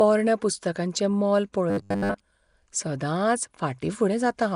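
From start to finish, the speech carries a rough, hissy halo and a smeared, underwater tone. This is most likely Nellymoser compression. Its coarse blocks starve weak bands and fill them with noise. The damage fits a bitrate near 44 kbps.

From 1.70 to 2.20 s, the speech turns into a rigid, metallic buzz at 100 Hz. This is robotic sound from repeated short buffers. Audio likely arrived too seldom, so a 10 ms slice kept repeating. Most of the real audio in that span was skipped.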